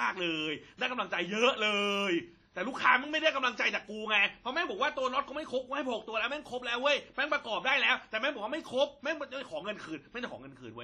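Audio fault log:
throughout, WMA compression: the speech carries a ringing, washy smear around its transients, with hiss that swells and fades along with the signal, and nothing is present above 13.3 kHz. This pattern is likely a transform codec working with long blocks, which spreads quantisation noise over tens of milliseconds and zeroes weaker spectral lines. The heavy damage points to an encode at around 32 kbps, too few bits to represent the speech cleanly.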